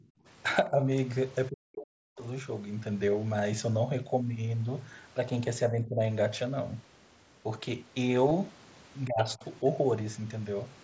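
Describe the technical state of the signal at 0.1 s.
At 0.1 s the voice is pulled down hard, roughly 35 dB, for about 150 ms within 0.0 to 0.2 s. This is speech suppressed in double talk. The likely cause is an echo canceller muting the talker while the other side spoke.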